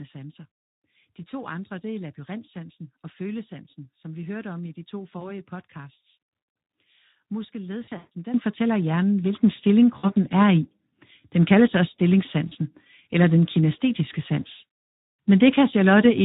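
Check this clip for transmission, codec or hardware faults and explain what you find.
Three faults are present: low-rate codec damage throughout, four bursts of packet loss covered by concealment, and three upward steps in microphone level.

Speex codec, throughout the 16 s of speech: the sound points to a mid-to-low quality setting, around 11 kbps. This CELP coder has few bits for the excitation signal, so the speech comes out plainly noisy and hoarse, and the upper band is only a shaped hiss.

VoIP packet loss concealed by the speech codec, at 5.19–5.33 s just after "om i de to", 7.83–8.08 s, 9.97–10.12 s and 12.48–12.54 s: the decoder extrapolates its last pitch and filter while fading the gain. Each dropout becomes a buzzy, fading smear that stays weak briefly after packets return. The 7.83 s burst is the longest, with its longest gap about 140 ms.

Microphone volume stepped up, at 8.34 s just before "fortæller hjernen", 9.36 s just after it, and 10.38 s: the call software judged the input too quiet and raised the device gain in single steps, by about 10, 4 and 2 dB. 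Voice and background jump louder together at each step.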